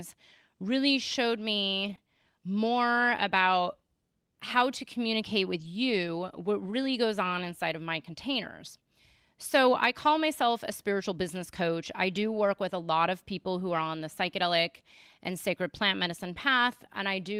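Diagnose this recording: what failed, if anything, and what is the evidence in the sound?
Network stage: lost packets rebuilt from error correction at 1.83–1.93 s, 5.59–5.65 s and 13.67–13.81 s. The decoder played low-bitrate copies, so the speech turns rough and noisy. On a spectrogram these spans look grainier, with smeared harmonics.

Network stage: a short concealed packet loss at 1.95–1.99 s, with about 20 ms missing. The decoder extrapolated the preceding sound and then blended back.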